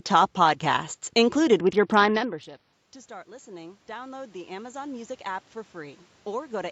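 A speech clip with two faults. Just after "top podcasts included", from 1.60 to 2.73 s, a Bluetooth SBC bit pool drop starves the codec, consistent with a fall from bit pool 31 to 7 at around 61 kbps, so the treble dulls and gritty noise rises. Then, from 3.07 to 6.67 s, automatic gain rising answers an input about 23 dB quieter by lifting gain about 12 dB, and voice and room noise swell together. The talker shifting position around 2 s is a natural level change.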